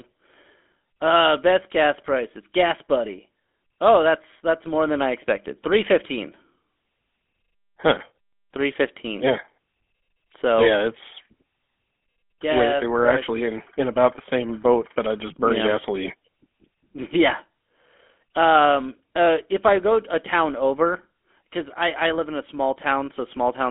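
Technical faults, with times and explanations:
Throughout, GSM full-rate codec: the speech has a buzzy, gravelly roughness. The codec models the vocal tract and excites it with coarse, regularly spaced pulses, which fits a 13 kbps rate. Nothing above 3.7 kHz survives, so the sound is narrow and dull.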